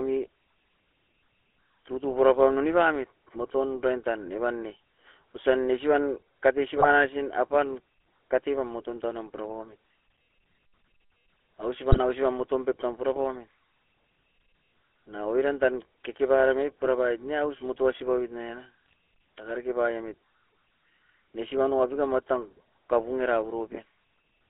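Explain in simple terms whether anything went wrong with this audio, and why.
The whole clip has gone through the GSM full-rate codec, the old mobile phone voice coder. It rebuilds the voice from a rough model plus a thinned-out pulse signal, so the speech comes out buzzy and gravelly, and the line keeps only about 300 Hz to 3.5 kHz, giving that boxed-in phone sound.

On top of that there are three brief bursts of GSM bit errors, at 6.76 to 6.87 s, 11.90 to 11.99 s and 18.86 to 18.93 s. Corrupted data reached the decoder, which rebuilt those moments from garbage settings, so each one breaks into a short squawk or gargle.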